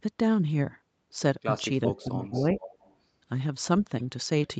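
From 1.86 to 2.6 s the speech drops sharply, by around 20 dB at its deepest, and thins out in pieces. This is speech suppressed in double talk, likely because the echo canceller heard both sides at once and turned the near talker down with the far-end echo.

Within that stretch, at 2.21 to 2.26 s, a faint scrap of the voice returns about 422 ms late, well below the speech. It comes back louder and longer from 2.53 to 2.95 s. This echo leak is likely the loudspeaker's echo getting past a canceller that did not fully remove it.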